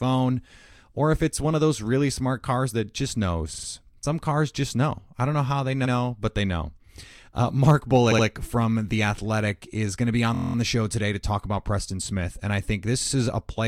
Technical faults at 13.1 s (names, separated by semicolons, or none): repeated frames